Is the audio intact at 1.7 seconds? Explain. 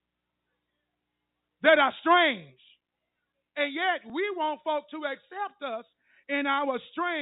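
Yes, at 1.7 seconds the speech is intact, with no dropout, click or distortion, just the narrow telephone bandwidth of G.711 coding, which passes nothing above 4 kHz.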